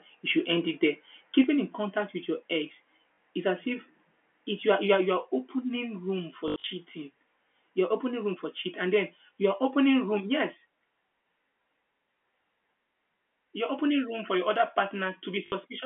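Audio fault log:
1.44 s and 10.2 s, microphone volume stepped down: the level drops abruptly, by about 4 dB between "should end it there" and "in contact with your", then by about 2 dB more. Both voice and background fall together in a single step, likely the call software lowering the microphone's input gain.
3.14–3.18 s, 6.48–6.64 s and 15.46–15.52 s, packet loss with last packet repeated: 40 ms is lost after "contact with your ex" and before "is as if it". Then 120 ms is lost across 160 ms after "you are opening room", with runs up to 80 ms. A final 60 ms gap follows. The receiver replays the last audio chunk, so the runs buzz robotically, which fits 20 ms packets.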